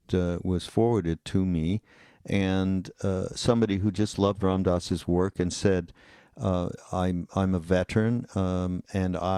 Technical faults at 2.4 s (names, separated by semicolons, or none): none